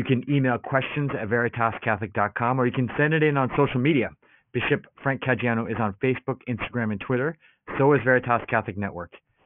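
Aliasing runs throughout the clip. The sample rate was lowered, pointing to a new rate near 6 kHz, without filtering first. Content above 3 kHz folded back to unrelated lower frequencies roughly 15 dB below the speech, so sibilants sound gritty and metallic.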